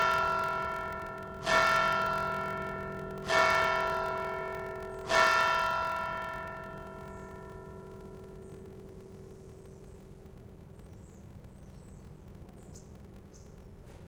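From start to finish a steady buzz at about 43.1 Hz runs under the sounds, and everything plays slow, at 0.861 times its proper speed. This is a block size mismatch (padded): one stage hands over shorter blocks than the next reads, which fits a 1024-sample read, and each block's shortfall is filled with silence. That gap repeats at the block rate, producing the buzz, and stretches playback by the ratio of the two sizes while the timbre holds.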